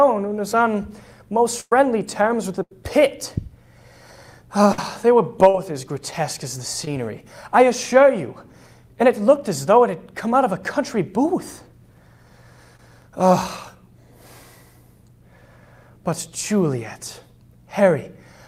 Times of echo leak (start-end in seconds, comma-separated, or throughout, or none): none